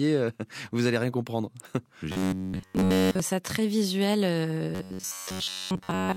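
From 2.12 to 3.20 s, and again from 4.75 s to the end, the speech turns into a rigid metallic buzz near 94 Hz. It is robotic sound from repeated short buffers, likely a roughly 11 ms chunk looping over the whole first stretch and most of the second.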